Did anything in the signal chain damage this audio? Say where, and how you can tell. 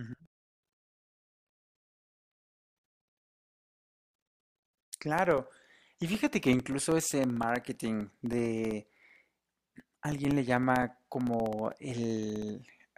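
Yes, the damage happens at the driver or USB stage, and it's a textbook case of periodic USB or driver dropouts. From 0.06 s to 12.87 s there's a tick every 64 ms, about a couple of hundred in all, and you only hear them under the speech. Each one is a gap of roughly a millisecond filled with silence. That's what you get when something stalls the bus or driver on a fixed schedule and the audio stream just loses a sliver each time.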